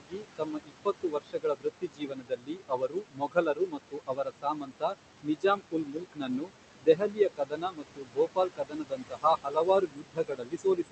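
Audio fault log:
Throughout, noise suppressor artifacts: the background is pulled down by about 21 dB wherever the suppressor judges a band to be steady noise, and this decision is remade frame by frame. The room noise, sitting only about 9 dB under the speech, therefore drops away in gaps and climbs back under each phrase. The voice's top end is already limited near 8 kHz by the call codec.
0.0–4.95 s, 5.23–6.52 s, 6.8–7.2 s and 7.36–10.92 s, speech cut by the noise suppressor: in these stretches the suppressor mistakes parts of the speech itself for noise and turns them down with the background, by as much as about 22 dB (about 21 dB in the short 6.8–7.2 s run). Soft consonants, word endings and quieter syllables sound swallowed or faint, over roughly four seconds in the first run, about a second in the second, a few tenths in the third, and through to the end in the last.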